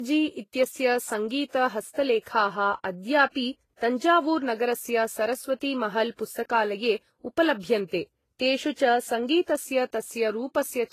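From start to finish the speech carries two distinct flavours of coding damage at once, the mark of transcoding between lossy codecs, likely a low-rate HE-AAC stage re-encoded to Vorbis. Nothing remains above 14.2 kHz, and the mismatched, layered artefacts set it apart from single-pass compression.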